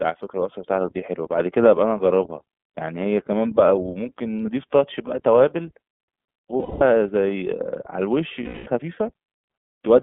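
Throughout the speech the sound is thin and slightly rough, with a synthetic edge and nothing above about 3.6 kHz or below about 150 Hz. This is the iLBC codec at work. It is a narrowband VoIP coder that rebuilds each frame's excitation independently, and the damage here is plainly audible. The texture fits iLBC's 30 ms frame mode at its lower rate of around 13 kbps.

At 6.59 s the speech gives way for 210 ms to a held, faintly buzzy, breathy vowel, and at 8.43 s the same happens again for 240 ms. Both are lost iLBC frames. Packets went missing, and the decoder filled each gap by repeating the last pitch cycle blended with noise, letting it fade. Because each frame decodes on its own, the speech snaps back cleanly at 6.82 s and 8.70 s.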